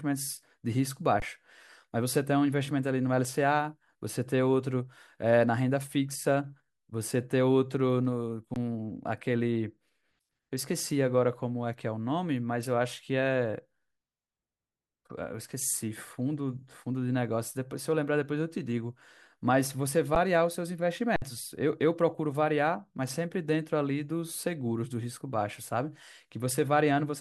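Speech with brief flat dropouts at 1.20, 8.54, 20.15 and 21.16–21.22 s: underrun with held sample, the output freezing while audio was lost.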